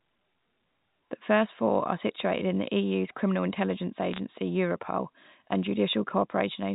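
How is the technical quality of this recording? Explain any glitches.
The recording has one glitch: bit errors on a digital phone line, from 4.12 to 4.19 s, right after "criminal intelligence". Scattered flipped bits in the telephone-coded stream each corrupt a single sample, and hits on sign or high-order bits throw sharp ticks into the band-limited speech. At a fraction of a percent error rate, they form a brief burst of crackle.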